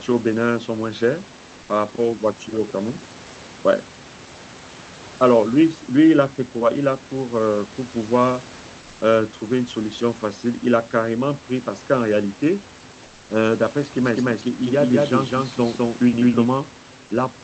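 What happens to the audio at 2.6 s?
Nothing goes wrong at 2.6 s: the speech comes through the call path intact, with only the room noise sitting well beneath it.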